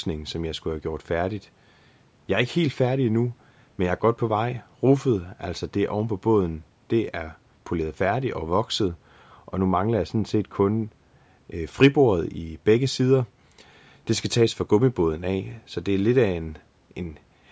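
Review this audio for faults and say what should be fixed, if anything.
From 8.88 to 11.29 s there's de-emphasis applied wrongly: a treble cut sloping toward about 13 dB down by 10 kHz, so that stretch goes dull and muffled. Only apply de-emphasis where pre-emphasis was actually used, and make sure it runs once in the chain.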